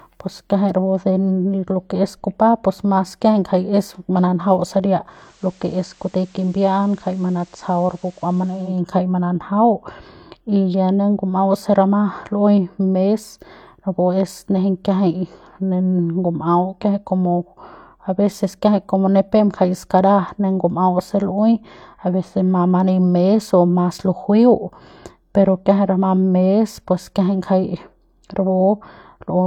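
From 5.05 to 8.84 s the speech goes through digital radio blending to analogue: the receiver loses digital and crossfades over about a third of a second to FM. Level drops about 2 dB, and faint hiss sits well under the speech.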